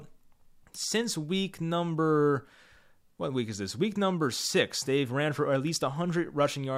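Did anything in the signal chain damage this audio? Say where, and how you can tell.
No, nothing in the signal chain audibly damaged this speech. No stage, from the wiring through to playback, left a mark that can be heard anywhere in the recording.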